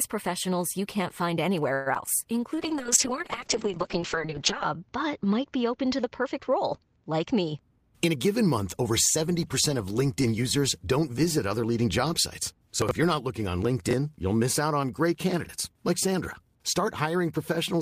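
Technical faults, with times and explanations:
1.73–2.09 s, repeated packet loss (robotic sound): Just after "professionals you can't find", the stream drops out four times in about a third of a second. The longest hole is 125 ms. Each hole is bridged by stretching the last sound, and concealment fills roughly 44% of the span, so the sound turns choppy with bits missing. On a spectrogram this appears as smeared, repeated harmonic bands and brief blank slivers. The waveform shows flattened, repetitive cycles.
2.57–7.68 s, call bitrate drop: The encoder is pushed to a much lower rate, which fits a fall from about 32 to 7 kbps, and it stays at its lowest for about 2.1 s. Coarser coding makes the sound rough and watery. The audio band also shrinks from 20 kHz to 8 kHz, so everything turns muffled. On a spectrogram, all energy above 8 kHz is abruptly cut off, and the remaining bands look blotchy and quantised until quality returns.
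7.60–9.17 s, jitter buffer speed-up: The receiver holds too much buffered audio, so it trims it down by repeatedly cutting out pitch-period-sized slices, around 150 ms in total. Playback runs at about 108% speed while the pitch stays unchanged, so this passage sounds slightly hurried. On a spectrogram the harmonics keep their spacing but the syllables sit closer together. The waveform shows small seams where cycles were removed.
12.82–12.91 s, 13.89–13.93 s and 15.44–15.49 s, chunks out of order: In each case a 23 ms piece of audio plays late. In the first case, between "other leading job sites" and "you're not looking on", it is three chunks late. In the second, between "you're not looking on" and "you'll miss out on", it is one chunk late, and in the third it is also one chunk late. Nothing is lost, but the reordering leaves three hard joins each time, heard as a jumbled blip. On the waveform these appear as abrupt discontinuities, and on the spectrogram as thin vertical broadband lines.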